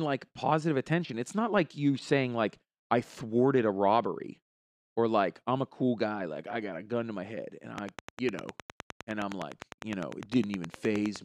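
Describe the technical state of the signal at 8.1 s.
At 8.1 s the speech is overlaid by a train of clicks. It begins at 7.78 s, just after "to my head and", and runs to 11.17 s. The clicks arrive at a steady 9.8 per second, about thirty in all. Each is a similar short pulse, roughly 10 dB above the speech. They tick through the pauses as well. The likely cause is electrical interference or a faulty connection or power supply injecting pulses.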